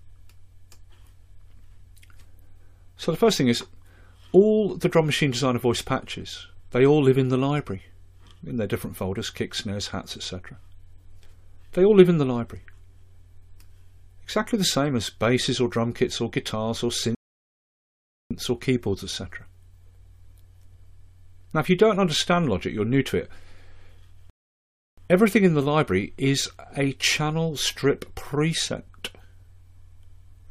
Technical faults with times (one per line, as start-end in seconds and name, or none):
17.15-18.31 rebuffering stall
24.30-24.98 rebuffering stall